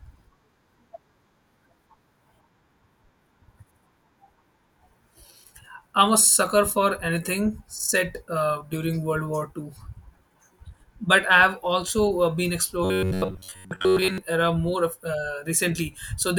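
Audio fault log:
12.85 to 14.18 s, robotic sound from repeated short buffers: the speech collapses into a stiff, metallic buzz pitched at 93.8 Hz. The words still come through roughly. The likely cause is audio arriving too slowly, so playback loops the last fragment to fill the gap. A buzz at that frequency fits a fragment of about 10.7 ms. Most of the stretch is repeated material, and the real audio there is skipped.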